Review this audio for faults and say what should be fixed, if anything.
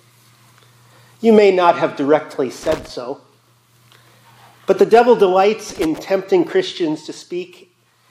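Loose connector crackle appears twice, from 2.63 to 2.89 s and from 5.70 to 5.99 s. Each burst lasts under a third of a second. The sound turns into irregular scratching and crackle. A worn or dirty contact is opening and closing rapidly as it moves. That chops the signal into fragments, and any DC on the line adds pops. Clean or replace the connector and secure the cable so it cannot shift.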